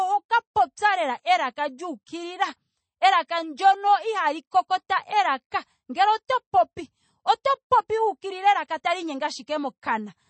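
Throughout the speech, the treble stops abruptly at about 8.4 kHz and the sound has a plainly audible watery, swirling texture, with s sounds turning metallic. This is likely MP3 compression at a low bitrate, which fits 32 kbps, zeroing weak frequency lines frame by frame.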